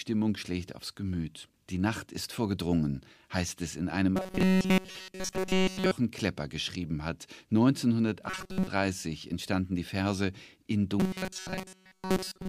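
Speech, likely starved of fresh audio so that a buffer of about 5.3 ms loops, shows robotic sound from repeated short buffers: a rigid 188 Hz metallic buzz after "heißt es in einem" from 4.17 to 5.91 s, briefly and partially from 8.30 to 8.67 s, then from 11.00 s to the end.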